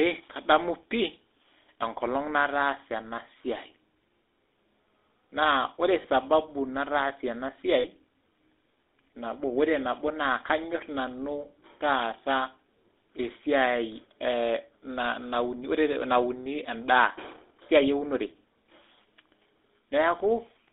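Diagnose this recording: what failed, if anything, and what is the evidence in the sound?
The codec stage failed: the call went through a GSM full-rate codec, whose character points to the 13 kbps full-rate coder. It models the vocal tract and drives it with a coarse, regularly spaced pulse excitation, so the speech has a plainly audible buzzy, gravelly roughness throughout. The line band runs from about 150 Hz to 3.6 kHz, leaving the speech thin and without its upper sibilance.

The network stage also dropped audio as lost GSM frames, at 6.02 to 6.07 s, which sounds like a single 20 ms frame, and at 7.8 to 7.86 s, which sounds like two frames or about 40 ms. The decoder covers each gap by repeating the last good frame's parameters. Both losses are heard as a short rough, metallic ring in place of the missing sound. They are too brief to fade to silence.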